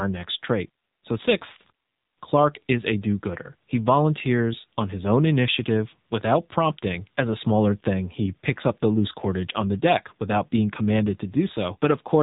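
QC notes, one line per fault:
Throughout: AMR narrowband mobile codec. Nothing above about 3.8 kHz survives, so the speech sounds boxed-in and phone-like. The coder rebuilds each 20 ms frame from a vocal-tract model and sparse pulses, giving a plainly buzzy, synthetic edge that fits a low rate near 7.4 kbps.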